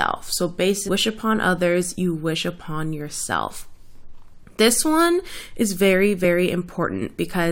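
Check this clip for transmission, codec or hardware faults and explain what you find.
One fault stands out in this speech clip: damaged data in the compressed stream, from 0.87 to 0.89 s, just before "upon others you wish". Corrupted bytes there leave the decoder misreading the frame and losing sync until it finds the next valid header, producing a brief glitch.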